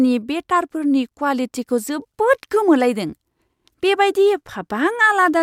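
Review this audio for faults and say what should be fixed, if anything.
Nothing needs fixing, since no technical fault can be heard anywhere in the signal.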